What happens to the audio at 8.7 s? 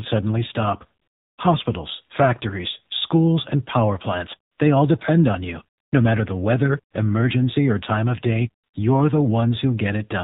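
Between 8.64 and 8.74 s, after "or time of day" and before "you're the", the real background drops out for 100 ms and a steady, smooth hiss takes its place. This is AMR comfort noise: the phone judged the pause silent, stopped sending speech frames, and the receiver filled the gap with synthetic noise. Under it, the speech stays buzzy and synthetic with nothing above 4 kHz. That is the AMR narrowband mobile codec, and its plainly audible damage fits a low rate around 7.4 kbps.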